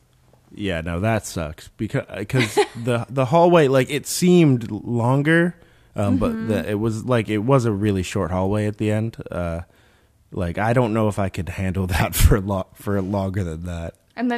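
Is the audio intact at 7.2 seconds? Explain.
Yes, the speech at 7.2 seconds is intact, with no dropout, click or distortion there.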